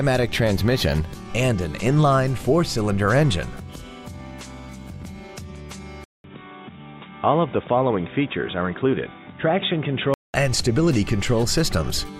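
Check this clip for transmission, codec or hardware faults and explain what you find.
One fault stands out. From 6.04 s to 10.34 s, the input is likely switched to a poorer device. A gap of about 200 ms opens at the change. After it, nothing is heard above 3.8 kHz, so the sound turns dull and boxy. The level drops by roughly 5 dB. A new background noise appears, around 35 dB under the signal. The narrower band, quieter level and fresh noise all belong to a different pickup path.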